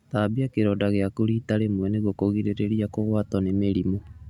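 No technical faults can be heard anywhere in the speech recording, and the signal stays intact and continuous throughout.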